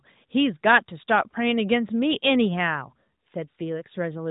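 Nothing in this speech recording points to a technical fault. It has the sound of a narrowband mobile call carried by the AMR-NB codec at 12.2 kbps, with nothing above 4 kHz and only light codec coloration.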